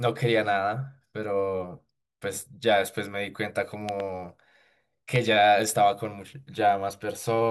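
At 3.89 to 4.02 s a loud pop arrives as a quick double thump roughly 10 dB above the speech, and at 5.16 s a single, sharper one about 15 dB higher. Each is likely a voltage pulse, showing as a waveform spike and a broadband vertical stripe.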